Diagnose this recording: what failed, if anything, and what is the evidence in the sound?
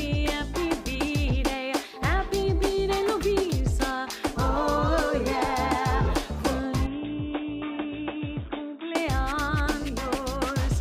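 From 6.87 to 8.95 s the sound turns dull and boxy, nothing above 3.8 kHz and about 5 dB quieter; the input likely switched to a poorer device.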